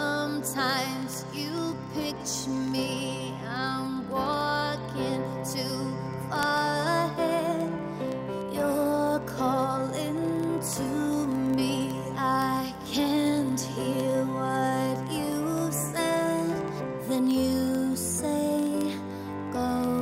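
From 0.11 s to 19.99 s, a steady stream of sharp ticks runs about every 0.04 s, some 25 a second. These are word clock ticks: the receiving device runs unlocked, roughly 500 ppm off the sender, so one sample slips at each crossing.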